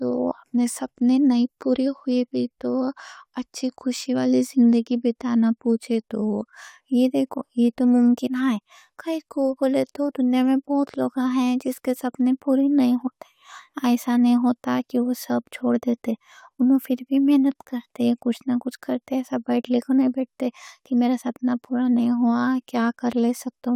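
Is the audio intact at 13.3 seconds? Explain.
Yes, the speech plays through intact at 13.3 seconds, with no audible fault at that moment.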